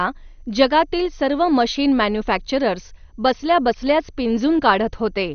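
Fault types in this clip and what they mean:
MP2 compression: the speech is dull throughout, with nothing above 6.5 kHz, and has a plainly audible gurgling, grainy roughness from coarsely quantised sub-bands. It is likely a low-rate Layer II encode, around 48 kbps. A plain low-pass filter would dull without that churn.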